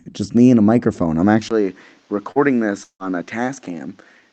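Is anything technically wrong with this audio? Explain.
Yes. The speech has three faults, heard through what sounds like a call codec path whose coding noise and 8 kHz top end point to Opus at a modest bitrate.

From 1.49 s to the end, right after "and a microphone I'm", the sound turns duller and boxier, likely because the input switched to a poorer device. A 20 ms gap marks the switch. The level then drops about 5 dB, and a new, faint noise floor appears. On a spectrogram, energy stops at 7.7 kHz from this point on.

At 2.31 to 2.39 s there is a short concealed packet loss. About 40 ms of audio never arrived, and the receiver filled the hole by extending the preceding sound before blending back. It is heard as a brief smear or wobble.

From 2.84 to 3.02 s comes a long network dropout, likely from a network stall. About 160 ms is missing. The concealment continues the last sound as a fading buzz or hiss, then leaves 80 ms of near-silence before the speech resumes with that part gone. 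The spectrogram shows a decaying smear followed by a blank band.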